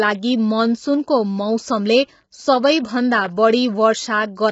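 Throughout the speech, the signal has likely passed through low-delay AAC compression at heavy settings, fitting a 16 kbps call codec. Its low bitrate forces coarse quantization, so the voice sounds rough and grainy, with noise filling between harmonics and nothing above 7.7 kHz.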